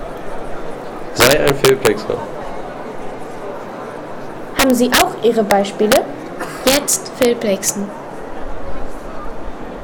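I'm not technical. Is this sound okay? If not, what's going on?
No. Integer overflow causes harsh cracks at 1.20–1.87, 4.59–5.02, 5.51, 5.92–5.97, 6.67–7.25 and 7.69 seconds. When the loudest moments exceeded the largest number the system could store, they wrapped around to the opposite extreme, producing sharp snaps much harsher than ordinary distortion.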